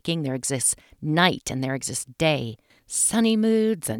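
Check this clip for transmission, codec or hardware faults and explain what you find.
No transmission, codec or hardware faults.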